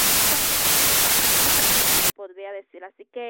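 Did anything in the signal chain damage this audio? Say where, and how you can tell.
Yes. Sample-format conversion: from 0.0 to 2.1 s a wrong sample width fault buries the speech in loud noise, running 1.33 times fast and pitched higher. Packed 24-bit data read as 32-bit splices bytes across samples. The spectrogram shows broadband noise over faint, raised harmonics.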